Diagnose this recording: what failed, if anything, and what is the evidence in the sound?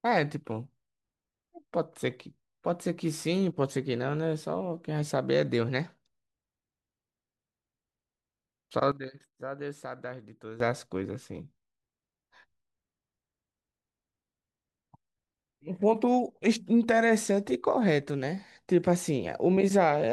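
At 8.92 s the speech drops by about 12 dB in a single step, and the background noise falls by the same amount. It returns to the original level at 10.60 s. This is a sudden gain jump in the digital processing chain, likely a gain setting applied without a ramp. It differs from AGC or a fader move because there is no gradual attack or release. It also differs from a dropout because the sound continues at the lower level.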